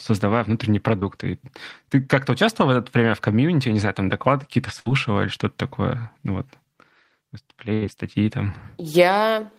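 Speech, with lost packets concealed by the receiver. Short concealed packet loss occurs at 0.99 to 1.04 s. About 20 ms of audio never arrived in time. The decoder extended the preceding sound for roughly 22 ms, then blended back. The result is a brief smear or wobble. Two bursts of packet loss follow, at 4.80 to 4.87 s and 7.73 to 7.84 s. Here several packets went missing together, about 60 ms and then 80 ms. The receiver held the last sound and let it fade, as a buzz or hiss. Speech then resumes further on, with that stretch gone.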